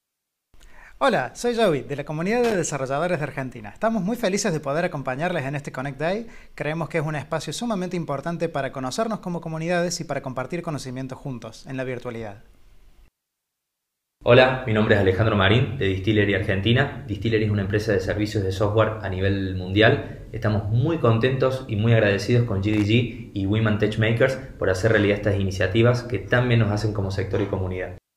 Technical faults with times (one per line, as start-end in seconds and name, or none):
2.44-2.55 loose connector crackle
22.73-22.85 loose connector crackle